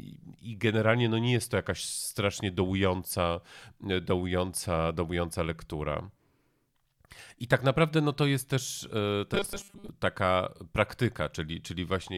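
Speech, with robotic sound from repeated short buffers between 9.34 and 9.89 s: the voice collapses into a rigid metallic buzz at 200 Hz, likely from audio arriving too slowly and a 5 ms segment being looped for most of that span while real audio is skipped.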